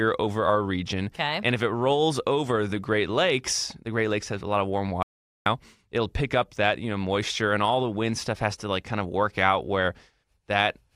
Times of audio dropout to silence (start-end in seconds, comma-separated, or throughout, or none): 5.03-5.46